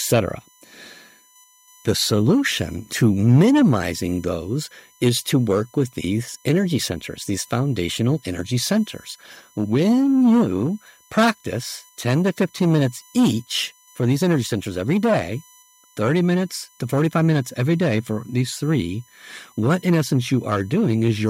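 USB whine runs throughout: a fixed 1 kHz tone with harmonics peaking at 21 kHz, roughly 30 dB below the speech, from bus frame current leaking in through the power or ground.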